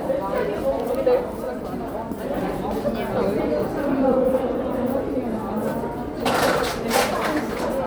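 No technical fault can be heard anywhere in this recording of sound. Nothing in it stops, jumps or breaks up at any point.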